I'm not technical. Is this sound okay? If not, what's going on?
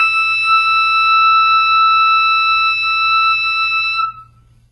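No. Likely HE-AAC compression, which fakes the treble by copying lower sounds upward, so the music's highs sound gritty and metallic throughout and stop at 11.7 kHz.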